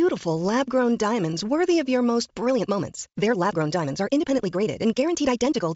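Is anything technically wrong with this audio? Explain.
Yes. From 2.43 s to the end at 5.75 s there is a time-stretched section: the speech suddenly runs about 1.66 times faster while its pitch stays the same. This was likely caused by software compressing the passage to a target length by dropping short pieces, which makes it sound rushed. Throughout, the G.722 wideband telephone coding at 64 kbit/s carries speech up to about 7 kHz, with faint upper-band hiss.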